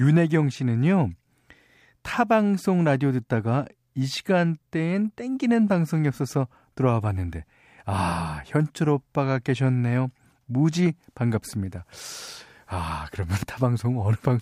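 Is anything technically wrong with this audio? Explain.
No, nothing technically wrong stood out on listening to this speech recording.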